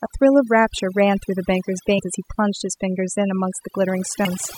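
Overdone noise removal runs through the whole recording. A noise reduction stage set far too aggressively has pushed individual frequency bands down or out whenever their level sat close to its noise estimate, and the quieter parts of the voice were caught along with the noise. The result is a background that drops away and breaks up into twinkling, glassy specks.

Damaged data in a compressed stream appears from 1.98 to 2.00 s and again at 4.25 s. In both places part of the encoded stream was corrupted, so the decoder could not read those frames properly, lost its footing and had to search for the next valid frame boundary before resuming. Each spot is heard as a brief glitch, a chirp, squawk, click or short hole.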